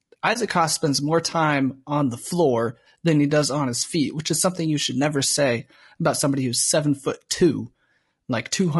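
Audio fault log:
throughout: low-delay AAC compression. The speech has a rough, grainy texture, with a noisy haze filling the gaps between the voice harmonics and a top band that sounds thin and somewhat synthetic. The likely cause is AAC-ELD, the low-delay coder used for video calls, whose short frames separate pitch harmonics poorly and spend bits inefficiently. The damage is plainly audible and fits a bitrate of about 32 kbps, too little for this coder to keep voiced sound clean.
0.33 to 0.37 s: AAC frame loss with muting. The sound briefly sinks into a short, soft-edged gap and then returns. This points to a single lost frame of about 20 ms whose spectrum the decoder replaced with silence. Because AAC frames overlap, the neighbouring windows taper the signal down into the hole and back up out of it. This spreads the dropout slightly wider than the frame and rounds off its edges.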